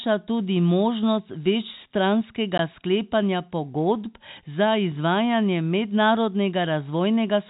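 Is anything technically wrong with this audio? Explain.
Yes. At 2.58 s the speech, already band-limited to 4 kHz by the G.711 call path, drops out in a short hole: a 16 ms block of digital silence. The sound cuts out abruptly and comes back with no fade.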